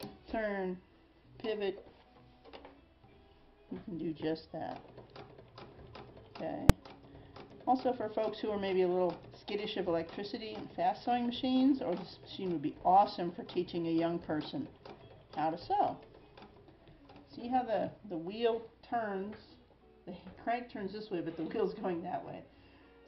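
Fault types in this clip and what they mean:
Invalid numbers at full scale: at 6.70 s a single sharp bang cuts through the sound. A calculation in the processing chain produced infinite or undefined values, and these were clamped to the largest possible sample value, so the output was pinned at one extreme value, far beyond the audio's peaks, for one processing block. That block lasts only about 2.9 ms, which fits a 128-sample block, too short to hear a separate onset and release, so it registers as one loud crack.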